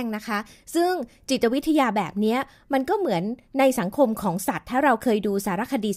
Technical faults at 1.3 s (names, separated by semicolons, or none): none